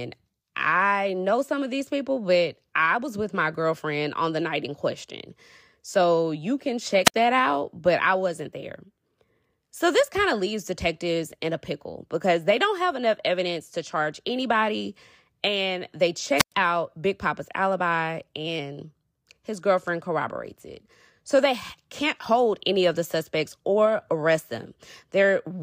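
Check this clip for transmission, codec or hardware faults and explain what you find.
Two wireless microphone squelch dropouts occur, at 7.04 to 7.14 s and 16.37 to 16.52 s. The FM radio link weakens, hiss climbs, and the receiver's squelch gates the output shut, leaving near-silent gaps of about 63 ms and 106 ms before the speech returns.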